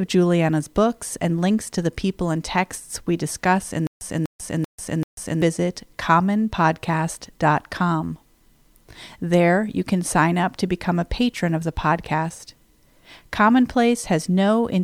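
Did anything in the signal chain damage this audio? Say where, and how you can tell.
Yes. Stutter with silent gaps, 3.87 to 5.42 s: a 247 ms burst repeats four times between 141 ms digital silences, likely a stalled playback buffer replaying its last fragment.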